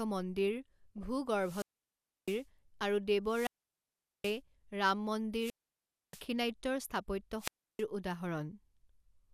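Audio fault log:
0.98–1.06 s, DAB burbling: a brief burst of burbling lasting about 80 ms lies over the speech, as though single frequency bands briefly jump in level. Weak reception let bit errors slip past the error correction into the MP2 data. Corrupted scale factors and samples then distort individual sub-bands for up to a frame. The sound points to a small residual error rate, around a tenth of a percent.
1.37–2.45 s, 3.26–4.40 s, 5.38–6.25 s and 7.38–7.85 s, wireless microphone squelch dropout: each event starts with a swell of hiss and static, falls into a near-silent hole, then the speech comes back. The holes last about 0.66 s, 0.78 s, 0.63 s and 0.32 s. The analogue FM radio link faded until the receiver's squelch muted its output, and the audio returned once the signal recovered.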